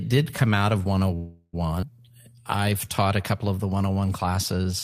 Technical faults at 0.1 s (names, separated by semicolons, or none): none